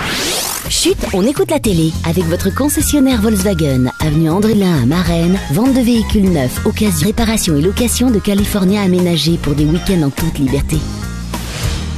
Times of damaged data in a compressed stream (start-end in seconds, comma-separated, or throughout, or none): 2.00, 4.53, 7.01, 10.59